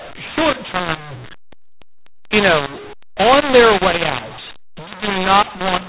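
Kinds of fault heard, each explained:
mu-law and A-law mixed up: The speech is harsh and gritty throughout. Its loudness lurches unevenly, with some parts too strong and others thinned, and the gaps between phrases fill with hiss instead of falling silent. All of this sits inside the narrow telephone band that stops at 4 kHz. The cause is G.711 audio coded with mu-law but decoded as A-law, so each 8-bit code maps to the wrong level and the quietest samples land well above silence.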